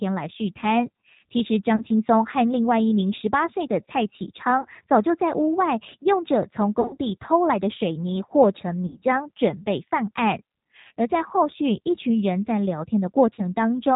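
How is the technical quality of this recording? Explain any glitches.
The quality is poor. The G.729 codec, here the 8 kbit/s G.729A variant, is audible throughout. It removes everything above 4 kHz and rebuilds the speech from a few pulses, so it sounds rough and synthetic.

VoIP packet loss concealed by the speech codec occurs at 1.76–1.84, 4.61–4.66, 6.81–6.97, 8.86–9.04, 10.87–10.92 and 13.34–13.41 s. The decoder stretches its last sound into a fading buzzy tone or coloured noise, and the speech recovers slowly. The gaps at 6.81 and 8.86 s are the longest, with losses scattered over about 160 ms.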